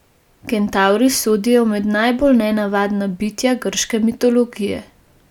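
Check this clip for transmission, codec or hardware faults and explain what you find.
Nothing stood out on listening to this speech recording.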